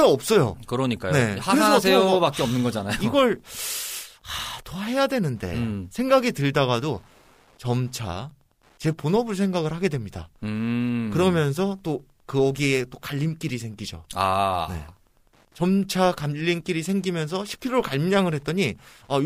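From 1.39 s to the end, Wi-Fi interference ticks steadily every 102.4 ms. A nearby radio's beacon is rectified by the circuit, sitting far below the speech.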